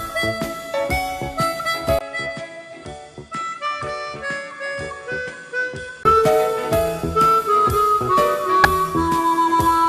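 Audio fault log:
1.99 to 6.05 s, input switched to a poorer device: after a gap of about 20 ms the sound turns duller and quieter, by roughly 10 dB. Nothing remains above 9.8 kHz, and a new background noise sits about 50 dB below the signal. The likely cause is recording moving to a narrower-band microphone or headset profile. A simple filter change would not do this. Level, bandwidth and noise floor all change together at the switch and all return at 6.05 s.
5.27 s and 8.64 s, damaged data in a compressed stream: each is a brief fault lasting about 15 ms. At these points the decoder met corrupted frames, misread or refused them, then resynchronised on a later frame header.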